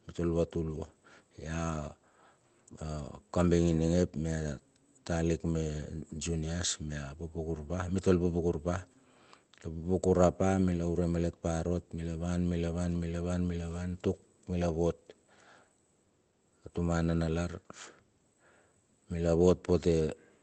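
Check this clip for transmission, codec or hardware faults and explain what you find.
No transmission, codec or hardware faults are audible here.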